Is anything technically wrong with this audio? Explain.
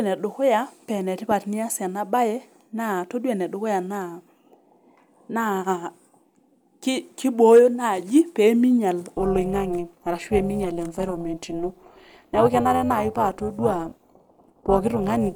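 Yes, there are two faults. From 1.31 to 1.33 s, a loud pop, likely a voltage spike from a switch or static, adds a sharp thump a few decibels above the speech. From 9.16 s to the end, overlap-add ripple, where frames are rejoined with mismatched overlap gain, swings the level by about 11 dB around 300 times a second, giving a metallic buzz with extra tones around the voice.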